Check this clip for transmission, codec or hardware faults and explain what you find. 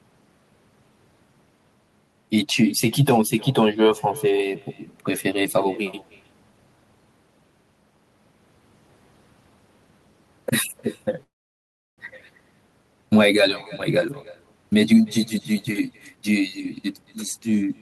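Three faults stand out: a steady echo, one freeze, and a hurried stretch near the end.

Throughout the clip there's echo with no canceller. Every phrase is shadowed by a quieter, thinner copy, about 25 dB down and trailing by roughly a third of a second. That's the far end's loudspeaker feeding its microphone, sending the talker's own audio back over the round trip with nothing cancelling it.

From 11.23 to 12.00 s there's a call audio freeze. The sound is stretched into a short fading tail, then goes nearly silent for about 0.7 s, 0.74 s filled in total. The likely cause is held-up packets draining the jitter buffer. Once they arrive, playback resumes where it stopped, so nothing is lost, just delayed.

From 15.17 to 17.7 s the jitter buffer speed-up kicks in. Playback runs at 120% speed at unchanged pitch, sounding rushed. The buffer had built up excess audio, so the receiver trimmed many tiny pitch-period slices in a row, roughly half a second altogether, to pull the delay back down.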